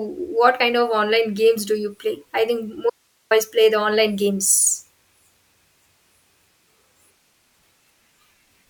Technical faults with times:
2.90-3.31 audio dropout to a faint residue

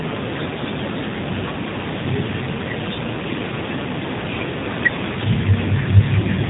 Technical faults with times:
0.00-6.50 G.729 codec

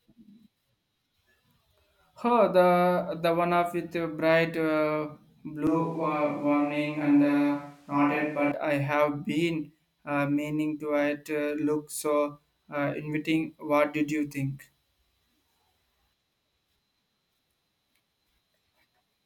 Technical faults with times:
5.67-8.52 switch to a distant microphone

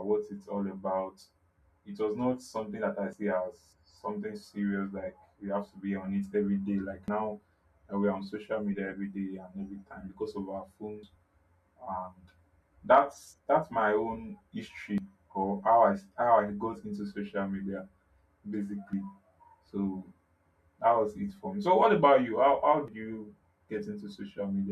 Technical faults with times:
3.13 audio missing between chunks
7.08 audio missing between chunks
11.03 audio missing between chunks
14.98 audio missing between chunks
18.93 audio missing between chunks
22.88 audio missing between chunks

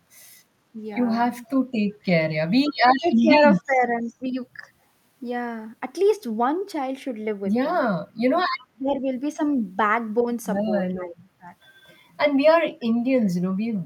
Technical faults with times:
1.33-1.50 echo leak
2.99-3.31 speech suppressed in double talk
3.65-3.75 speech suppressed in double talk
8.59-8.67 echo leak
8.73-8.97 speech suppressed in double talk
10.94-11.50 speech suppressed in double talk

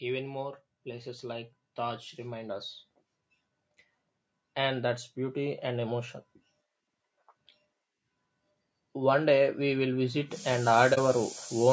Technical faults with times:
0.00-11.72 low-delay AAC compression
0.05-2.69 automatic gain rising
4.55-6.08 automatic gain rising
8.96-11.68 automatic gain rising
10.94-10.98 AAC frame loss with muting

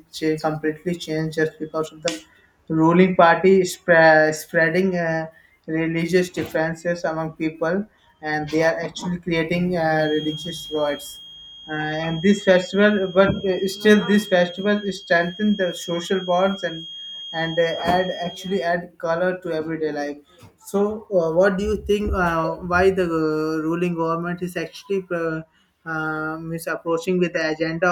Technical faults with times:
9.91-18.78 feedback whistle

